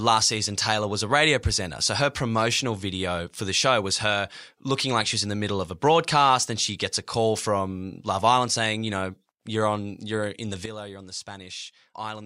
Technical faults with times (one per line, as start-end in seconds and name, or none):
10.66-12.26 sudden gain jump